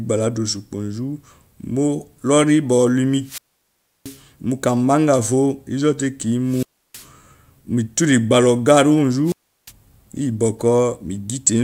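At 3.22 s the speech breaks up in a wireless microphone squelch dropout. The analogue FM signal fades, hiss rises briefly, and the receiver's squelch mutes its output for about 0.68 s before the signal recovers at 4.22 s. The same fault repeats from 6.45 to 7.08 s, with a mute of about 0.32 s, and from 9.24 to 9.72 s, with a mute of about 0.36 s. Each is heard as a short rush of static followed by a hole of near silence.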